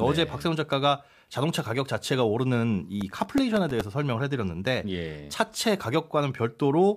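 From 3.01 to 3.81 s the speech carries processor overload crackle. About fifteen tiny buffers, each roughly 1.5 ms, miss their deadline and replay stale audio with hard edges, giving a gritty tearing. The waveform shows small jagged discontinuities, and the spectrogram shows thin vertical broadband streaks.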